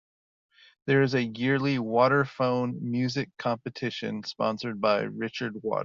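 Listening to the speech recording, nothing technical stood out as wrong at any point.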